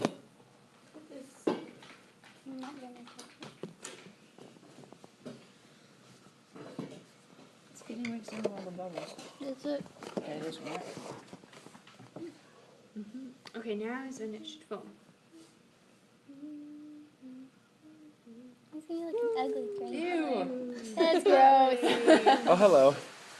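No faults are audible; the sound carries the ordinary coding texture of a call codec such as Opus, with the top end rolled off around 12 kHz as that path normally does.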